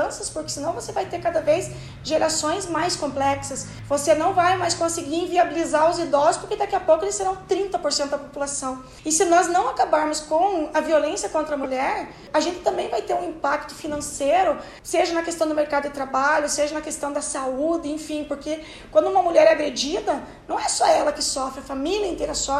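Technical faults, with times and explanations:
11.63–11.66 s, corrupt frame decoded: a single damaged compressed frame was played despite its flipped bits. The decoder misread gains or codes, scattering energy into the wrong frequencies for about 26 ms, heard as a short chirp, squeak, blip or burst of noise peaking around -15 dBFS.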